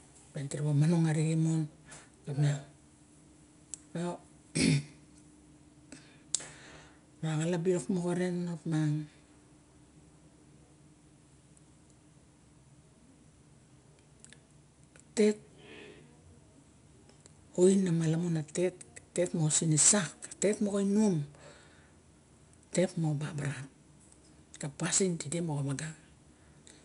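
4-bit ADPCM compression runs throughout: each sample is coded as a coarse step from a prediction, leaving level-following gritty hiss, with nothing above 10.6 kHz.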